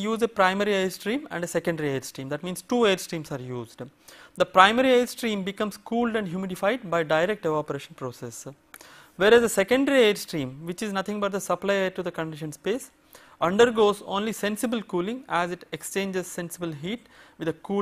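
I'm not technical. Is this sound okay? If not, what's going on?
No. At 13.10 to 13.14 s and again at 15.64 to 15.68 s there's a brief jumbled blip. This is chunks out of order: a 20 ms slice of audio arrived one slice late and played after the one meant to follow it, leaving hard joins.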